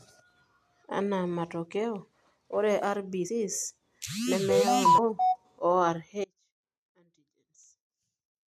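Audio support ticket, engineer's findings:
Audio jumps ahead at 3.28 s and 4.97–4.99 s. Compressed frames skipped, about 150 ms and 200 ms lost. Decoder drops whole 23.2 ms frames (missing or rejected as damaged).

Abrupt cut at 6.24 s, lasting to the end. Only a faint residue remains, about 35 dB below normal level. Audio dropout to a faint residue. Likely upstream signal loss, with the downstream path still live.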